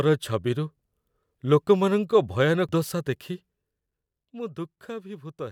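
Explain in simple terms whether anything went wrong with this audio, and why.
At 2.69 s there is damaged data in a compressed stream: the decoder hit corrupted bytes and lost its place, so the speech glitches there.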